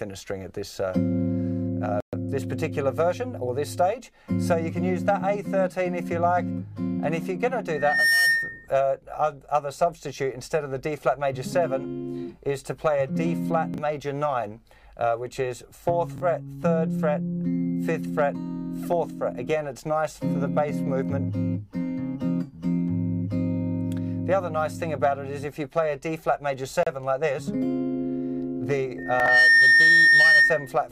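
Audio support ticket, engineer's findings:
Dropouts to dead silence at 2.00–2.13 s (124 ms) and 26.83–26.87 s (33 ms). Likely a Bluetooth stall: radio interference delayed packets, the headphone buffer emptied, and output paused until retransmissions arrived. Gap lengths differ, so it is intermittent link trouble, not a fixed buffer cycle. Check the RF environment and codec link margin.

Loudspeaker feedback squeal: a 1.8 kHz tone swelling up over a little under half a second at 7.72–8.67 s, peaking about 5 dB above the programme. It recurs stronger at 28.98–30.73 s, about 10 dB above. The mic is picking up its own speaker, and loop gain exceeds unity at 1.8 kHz, so that frequency self-reinforces until the loop is broken. Fix with a notch at 1.8 kHz, reduced gain, or mic repositioning.

Chunks out of order: short jumbled blips at 13.74–13.78 s and 16.16–16.20 s. A 20 ms block plays one slot late, landing after its successor, with three abrupt joins around it. 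A longer scramble at 29.20–29.28 s, inside the second squeal, fits a block displaced by three slots. Points to a reordering or jitter-buffer fault in the packet or write path, not data loss.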